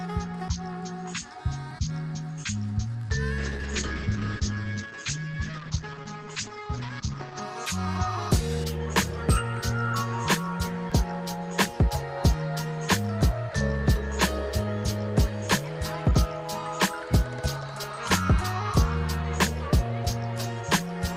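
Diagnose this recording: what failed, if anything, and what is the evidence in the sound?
At the buffer or driver stage, the output was likely not filled in time, leaving a block of digital silence at 1.71 s. The gap lasts only about 2 ms, so it is heard as a tick rather than a hole: the waveform drops straight to silence and jumps back with no fade, and those two hard edges merge into one brief click.

At the network and codec stage, a call bitrate drop began at 3.38 s. The bandwidth estimate fell, and the Opus encoder went from 40 kbps down to 9 kbps, holding the lowest rate for about 4 s before recovering by 7.48 s. At that rate the codec narrowed the audio band from 12 kHz to 8 kHz and quantised more coarsely, so the sound turns muffled and rough, with a watery texture, until the full 40 kbps returns.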